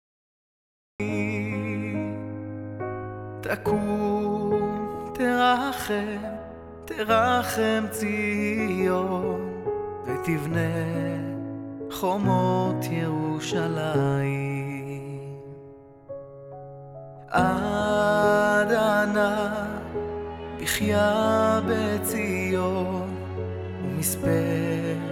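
The first second or so is dead digital silence, and then at about 1.00 s the sound just appears mid-flow with no attack or fade-in. That's a classic cut-off start: capture began late, so we drop straight into something already underway.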